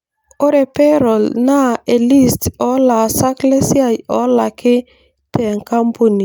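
No technical faults can be heard anywhere in the recording.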